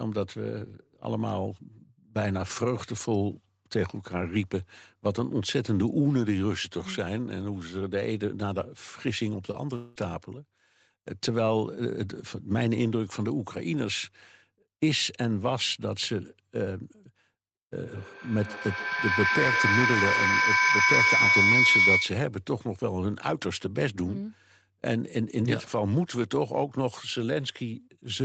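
Short concealed packet loss, 9.51 to 9.55 s: about 20 ms of the call did not reach the decoder in time, and the receiver bridged the gap by extending the sound just before it for about 21 ms, then blending back into the real signal. It comes through as a tiny smear or wobble in the speech rather than a gap. Anything very brief that fell in that slot, such as a consonant, may simply be missing.

Long network dropout, 9.75 to 9.98 s: for about 200 ms the incoming audio is replaced by a continuation of the preceding sound, a buzzy or hissy extension that fades without ever dropping to silence. The speech then resumes further along, with that stretch gone. The cause is likely a network interruption long enough that the receiver had nothing to play and had to keep inventing sound until real packets arrived again.

Feedback howl, 17.84 to 22.35 s: two devices in the same room are on the call, so the loudspeaker output re-enters a microphone and gains level on each round trip. 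The repeats narrow to a tone at roughly 2 kHz and peak at about 6 dB above the speech. The howl pulses at an interval of around 150 ms, the loop's delay, and stops once the loop is broken. Throughout, nothing is heard above 8 kHz, which fits a wideband Opus call at around 24 kbps.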